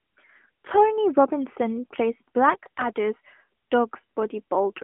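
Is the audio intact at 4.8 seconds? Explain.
Yes, the audio is intact at 4.8 seconds, with the speech carried through an AMR narrowband mobile codec at 12.2 kbps that confines it to the 200 Hz to 3.4 kHz telephone band.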